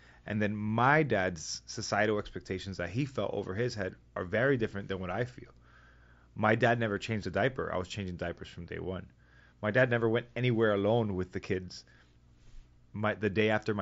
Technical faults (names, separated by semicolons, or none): none